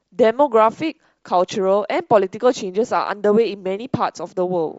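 Throughout the clip, the speech carries a breathy, grainy sheen up top, and it's plainly audible. That points to Bluetooth LC3 compression, likely at a lean rate consistent with 32 kbps in 10 ms frames, where the encoder zeroes much of the high band and fills it with noise.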